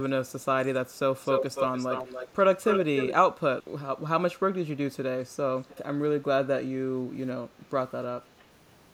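It's a speech clip with an echo leak in three spots: a delayed copy of the speech trails it by about 286 ms from 1.24 to 2.3 s and again from 2.64 to 3.15 s, nearly as loud as the speech itself, then a faint scrap at 5.67 to 5.78 s lagging about 308 ms. The likely cause is a far end on speakerphone whose echo canceller let some of its own loudspeaker output back into the mic and returned it down the line.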